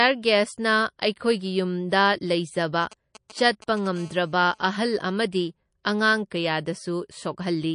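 Throughout the speech there is a watery, swirling quality. The treble is cut off, and faint high detail flickers in and out from moment to moment. S sounds turn metallic and chirpy, and consonant onsets smear. This is likely MP3 compression at a low bitrate, plainly audible and consistent with something around 40 kbps. The encoder discards weak frequency lines and the top band to save bits. Unlike a simple low-pass filter, the loss here shifts and warbles over time rather than staying fixed.

From 1.89 to 1.92 s a sharp attack arrives with a brief hiss just ahead of it. The noise in that gap rises by about 14 dB and spreads over 25 ms. This is pre-echo. The codec smeared the quantisation noise meant for the loud onset across its whole transform window, about 52 ms, and it never switched to short blocks that would have confined it. The result is a soft, blurred attack. The hiss comes before the sound, which separates it from a reverb tail or a click.

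Between 2.83 and 3.88 s a galloping dit-dit-dit of short buzzes sits well below the speech. These are GSM signalling bursts from a nearby 2G phone handshaking with the network. The audio circuit rectifies the radio pulses, so they come out at the 217 Hz burst rate. Unlike a steady hum, they arrive in irregular clusters.

From 3.96 to 4.80 s the pattern becomes a continuous, hard, raspy 217 Hz buzz with many harmonics, about 29 dB below the speech. This is GSM phone buzz, produced once the phone is in a call and transmits in steady bursts 217 times a second. Mains hum would sit at 50 or 60 Hz and sound smooth. This buzz is harsher and pitched higher, and it pays no attention to the speech.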